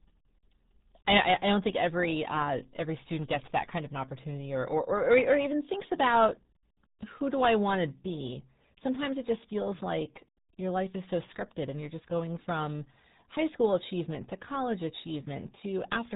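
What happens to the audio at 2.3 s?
At 2.3 s the speech is passing through the RealAudio 14.4 codec, which affects the entire recording. This early dial-up speech coder squeezes the signal into a tiny data budget, consistent with roughly 8 kbit/s, and discards everything above 3.8 kHz. The result at that moment is heavily damaged speech: the top end is gone, leaving it muffled and dull, while the coarse coding adds a gargly, bubbling texture to each syllable.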